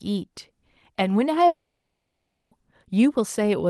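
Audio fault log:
1.47–2.52 s, long network dropout: the sound stops being replaced by real audio and the last fragment is drawn out into a buzzy tail that fades over roughly half a second, leaving about 0.53 s of near silence before the stream resumes. About 1.04 s of material is simply absent. The likely cause is a gap in packet arrival that the receiver's concealment covered, heard against the Opus path's roughly 12 kHz band limit.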